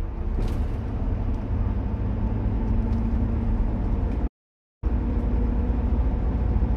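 At 4.27 s the sound cuts out abruptly and the output stays silent until 4.84 s, a gap of about 0.55 s before the audio resumes. This is a playback stall. The likely cause is that the player ran out of buffered data, or its playback thread was blocked, so nothing reached the output until it recovered. To the ear it is a clean drop to silence in mid-flow, followed by a sudden restart.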